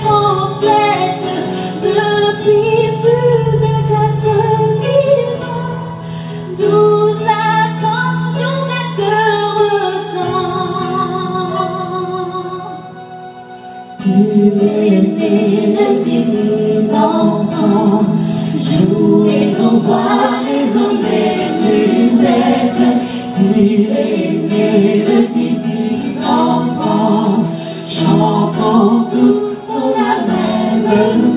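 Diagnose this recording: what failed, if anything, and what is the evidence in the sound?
Nothing failed here as far as I can hear, and there's no dropout, glitch or other sign of trouble anywhere in the recording to point to as evidence.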